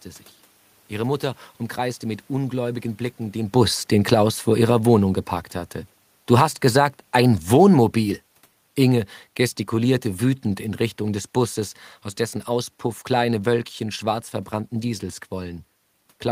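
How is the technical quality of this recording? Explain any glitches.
The main problem is an automatic gain control pulling the level down. From 2.44 s, right after "umkreiste mit", the level drifts lower until about 11.64 s, just before "aus dessen", ending up roughly 8 dB quieter. Automatic gain falling happens when the AGC decides the input is too hot and eases its gain down bit by bit. Because the gain is applied to the whole signal, the room noise sinks right along with the speech. That's the tell that separates it from the talker shifting position around 3.5 s.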